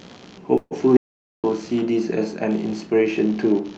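Computer activity noise runs under the whole clip as a buzzy, scratchy pulsing at around 70 pulses a second, roughly 30 dB below the speech. On a spectrogram it forms faint, evenly spaced vertical ticks or a comb of low harmonics that continue through pauses, independent of the speech.

From 0.57 to 0.73 s there is a call audio freeze. The last sound is stretched into a fading buzz, about 135 ms of fill in all, ending in about 40 ms of near-silence, most likely because packets stalled and the jitter buffer ran dry. The speech then resumes with nothing lost, just delayed. A spectrogram shows smeared, horizontally streaked energy decaying into a short blank band.

From 0.97 to 1.44 s there is an audio dropout to silence lasting about 0.47 s. The sound cuts off mid-flow and returns abruptly, with no room tone or hum in between, and that stretch of speech is gone. The likely cause is an input that briefly disconnected or muted. 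The waveform flatlines to silence, and the spectrogram shows a dark vertical block with hard edges.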